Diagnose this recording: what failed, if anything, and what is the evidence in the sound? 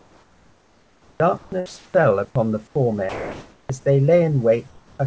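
The call processing stage most likely ran discontinuous transmission. During pauses the sender stopped sending real audio, and the receiver substituted synthetic noise, producing comfort noise in place of the background. The actual room background is replaced by a flat, featureless hiss from 0.00 to 1.20 s, 1.66 to 1.94 s, 2.67 to 2.75 s and 4.67 to 4.99 s. Each switch shifts the level by about -5, +1, -2 and -3 dB respectively as the noise fills each gap.

The sender's voice activity detector likely misjudged part of the speech as background and cut transmission, so sound was dropped by the voice detector and filled with comfort noise. At 1.38 to 1.52 s, about 60 ms of speech vanishes. At 3.09 to 3.69 s, about 250 ms is lost. At 3.79 to 3.85 s, about 30 ms goes missing. In each case speech resumes only when the detector triggers again, heard against a G.722 band that stops at 8 kHz.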